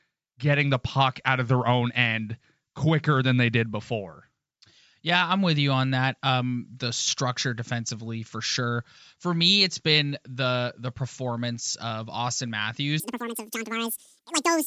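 Speech, and for most of it nothing stands out, but from about 13.00 s through to the end at 14.66 s it suddenly turns chipmunky: everything runs at double speed and jumps up a full octave, 12 semitones. That's the classic wrong sample rate symptom. Samples are being played back at twice their intended rate with no conversion, which fits 16 kHz material being clocked out at 32 kHz.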